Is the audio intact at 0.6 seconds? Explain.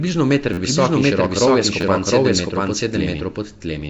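No. A repeated buffer runs from 0.53 to 0.58 s, just before "visok in širok rov": an 11.6 ms slice, which fits a 512-sample buffer, plays four extra times with hard joins, giving a brief buzzy stutter rather than a delayed copy.

At 0.6 s the doubled audio track is also present: an equally loud, full-band copy trails by about 0.7 s with no decay or room colour, which sets it apart from a natural echo. This likely comes from a second, slower capture path.

Nellymoser compression, likely the cause of the damage here, leaves nothing above 7.7 kHz and gives a hissy, underwater smear. Its noise-filled bands distinguish it from simple low-pass filtering.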